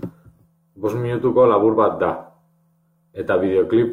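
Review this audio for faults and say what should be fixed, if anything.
Nothing stood out on listening to the speech, so there is nothing here to fix.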